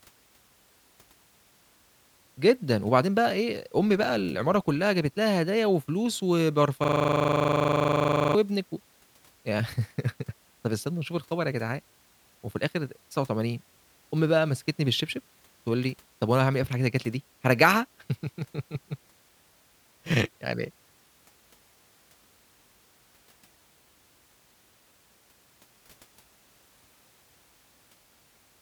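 From 6.84 to 8.35 s the speech gives way to a rattling 25 Hz buzz, one 40 ms fragment repeating nearly forty times. This is a system hang loop: the computer or driver froze while the sound hardware kept replaying the same buffer.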